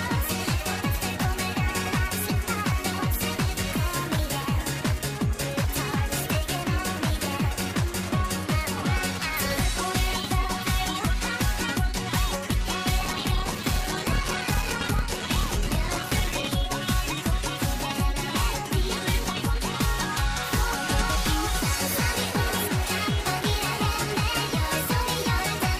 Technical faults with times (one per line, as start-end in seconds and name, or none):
12.98-16.49 block size mismatch (padded)